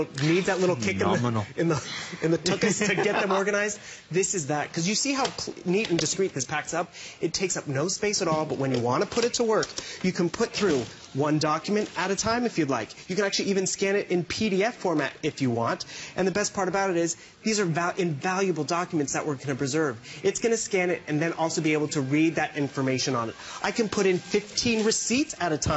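No technical faults can be heard anywhere in the recording. There are no dropouts, interruptions or damaged passages at any point in the audio.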